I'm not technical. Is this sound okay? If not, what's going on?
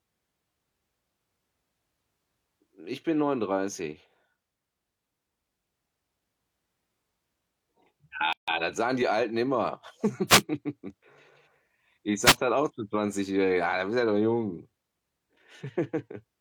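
No. There are two kinds of fault.

At 8.33 s the speech stops dead for about 150 ms and resumes at 8.48 s with "das sagen die." This is a gap at a join of encoded pieces. The recording was compressed in separate chunks, which seem to be about 10 s long, and then glued together. Each chunk carries a short stretch of padding silence, and nobody trimmed it out, so a hole with smeared edges sits at the seam.

At 10.28–10.42 s and again at 12.23–12.36 s there is a brief burst of hiss, the second just before "dann auch zu." This is a wireless microphone noise hit. The radio link between the microphone and its receiver weakened for a moment, likely from signal reflections cancelling each other. The receiver's background noise briefly rose, giving a short swish of static.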